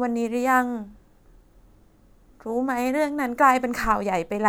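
Nothing goes wrong anywhere in this bit of speech, so there's no technical fault to point to at any moment.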